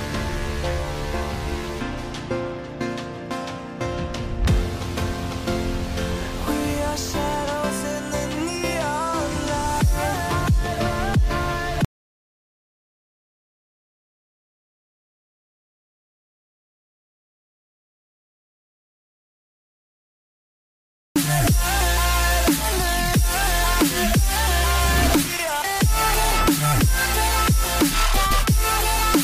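At 11.85 s the audio drops out to silence and stays dead until 21.16 s, so roughly 9.3 s is simply gone. There's no room tone in the gap, just silence, most likely a lost input or mute while recording continued.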